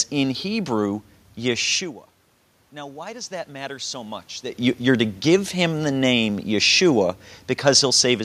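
From about 2.71 s to 4.28 s you can hear the automatic gain rising. The input had dropped by about 18 dB, probably because the talker leaned away around a second and a half in, and the gain control responded by slowly adding about 4 dB. Because it's gain and not the voice itself, the room noise swells right along with the speech over that second and a half, so the background gets louder as the level comes back up.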